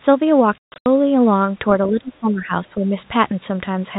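From 0.59 to 0.86 s, packet loss filled with silence punches hard-edged holes in the speech, the longest 140 ms, consistent with 20 ms packets; the waveform shows flat, near-silent gaps. Between 1.88 and 2.93 s the speech dips by up to about 20 dB in patches, likely speech suppressed in double talk by an echo canceller, visible as faded, thinned spectrogram energy.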